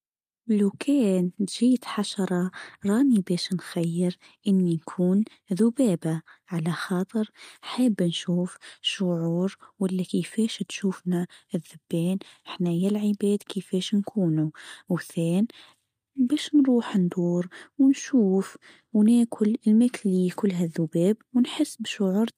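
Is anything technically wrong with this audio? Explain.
No, nothing technically wrong can be heard in this speech recording. No fault turns up at any point in the clip.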